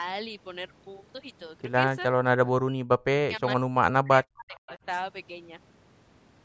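Speech runs through call microphone processing, with nothing above 8 kHz. From 2.18 to 3.42 s and 3.63 to 4.7 s, speech suppressed in double talk is likely, as the echo canceller mistook overlapping talk for echo, gating the voice down by roughly 40 dB across about a second each time. From 4.54 to 4.78 s, an echo leak, likely from incomplete cancellation, returns a faint copy delayed 467 ms at about 25 dB below the speech.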